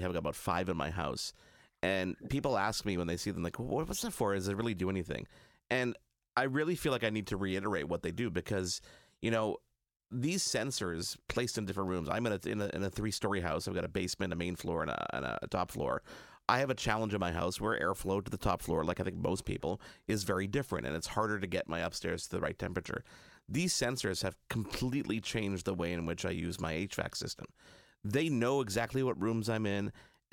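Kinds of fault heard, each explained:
Nothing stood out on listening to this speech recording.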